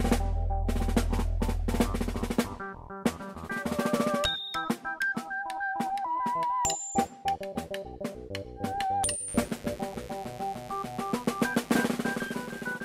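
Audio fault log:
9.28–12.68 s: mains buzz, a steady raspy 50 Hz buzz about 20 dB below the signal, from switching spikes twice per cycle spreading harmonics into several kHz.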